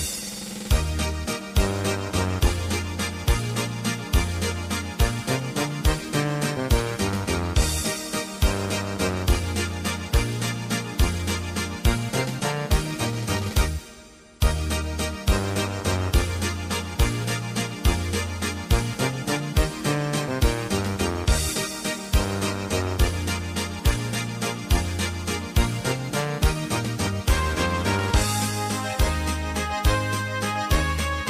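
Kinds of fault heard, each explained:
Nothing stood out as a fault on listening.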